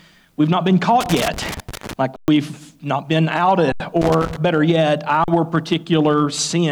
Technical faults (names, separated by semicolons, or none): loose connector crackle; underrun with held sample